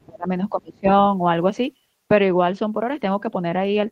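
Speech suppressed in double talk, from 0.0 to 0.3 s and again from 0.51 to 0.88 s: the speech sinks by roughly 25 dB. This is likely an echo canceller that could not separate the near-end talker from the loudspeaker echo during overlapping talk and turned both down.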